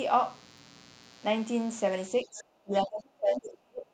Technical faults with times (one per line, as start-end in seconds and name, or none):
0.00-3.93 mains buzz
2.24-3.90 speech suppressed in double talk
2.39-2.43 other side's voice leaking through
2.75-2.83 other side's voice leaking through